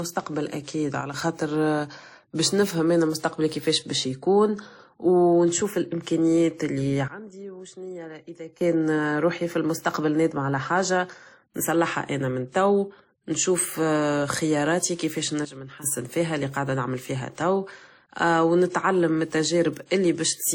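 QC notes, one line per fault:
throughout: transcoding between lossy codecs. The speech carries two overlapping textures of coding smear and swirl, with nothing above about 19.3 kHz. This is likely a low-rate MP3 pass, around 41 kbit/s, re-encoded to WMA near 48 kbit/s, each layer adding artefacts.
1.01–1.14 s, 7.08–8.61 s, 15.45–15.84 s: sudden gain jump. Speech and background noise drop together by about 6 dB, then about 17 dB after "و نشوف الامكانيات اللي" until "روحي فالنستقبل نادمة على", then about 12 dB after "توا نشوف خياراتي كيفاش" until "فيها اللي قاعدة نعمل", each snapping back abruptly. The likely cause is digital gain switched between samples without a ramp.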